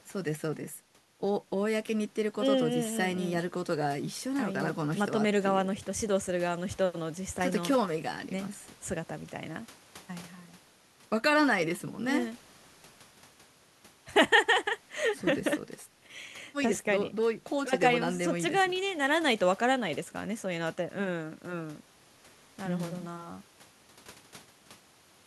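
Speech recording with no audible technical faults.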